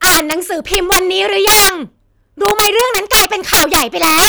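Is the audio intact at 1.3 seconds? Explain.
No. At 1.3 seconds the speech is affected by integer overflow, which runs through the whole clip. The signal was driven about 14 dB past full scale, and instead of being limited, the samples that exceeded the largest integer wrapped around to the opposite extreme of the range. Around a twentieth of the samples overshoot like this. On every loud peak, the waveform jumps from one end of the range to the other, producing harsh, violent cracks far sharper than ordinary clipping.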